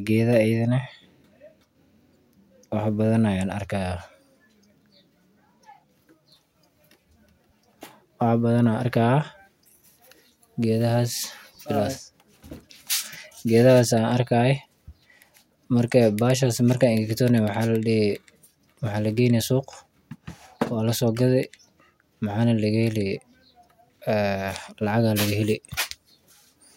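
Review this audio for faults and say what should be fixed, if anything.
No faults are audible in the audio, so nothing needs to be fixed.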